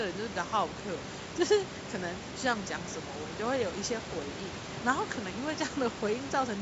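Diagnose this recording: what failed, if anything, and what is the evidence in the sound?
Nothing failed; no faults found.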